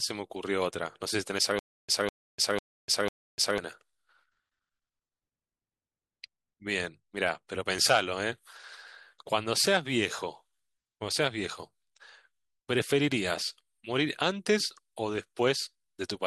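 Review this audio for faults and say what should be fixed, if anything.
From 1.59 to 3.58 s there's a stutter with silent gaps: a 200 ms burst of speech repeats four times, each followed by about 300 ms of digital silence, likely a stalled stream replaying its last fragment. Giving the player a deeper buffer or better network headroom should stop it from running dry.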